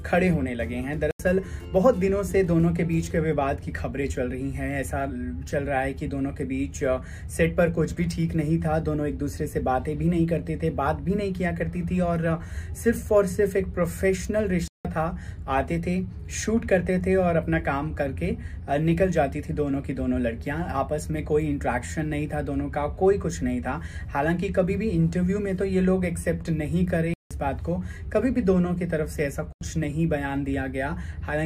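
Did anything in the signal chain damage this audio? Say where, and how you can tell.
Yes. The damage is at the driver or buffer stage: four blocks of digital silence. The sound drops to silence at 1.11–1.20 s, 14.68–14.85 s, 27.14–27.31 s and 29.53–29.61 s. Two holes last about 85 ms and two about 170 ms. Each cuts out and back in with no fade. The exact doubling points to whole buffers of about 4096 samples going out empty because the program missed its deadline.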